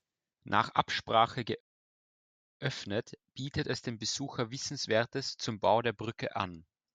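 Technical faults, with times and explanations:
1.60 to 2.61 s, rebuffering stall: the speech drops abruptly into silence for about a second, then picks up exactly where it broke off with nothing missing. Playback ran out of downloaded audio and waited for more to arrive, adding roughly 1.0 s.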